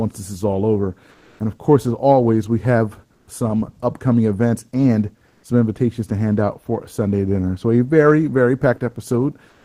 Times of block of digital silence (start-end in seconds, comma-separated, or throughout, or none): none